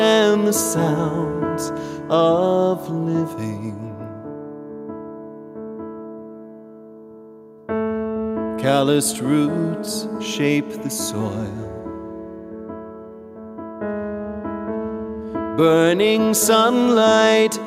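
No technical faults can be heard anywhere in the audio.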